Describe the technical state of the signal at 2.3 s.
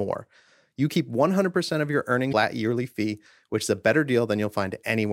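At 2.3 s the speech is interrupted by damaged data in a compressed stream, spanning 2.29 to 2.33 s, about 40 ms. Part of the encoded data at this point is corrupt, so the decoder misreads or rejects the affected frames, loses synchronisation and scans forward for the next valid frame header. The result is a brief disruption in the audio, heard as a chirp, squawk, click or short gap.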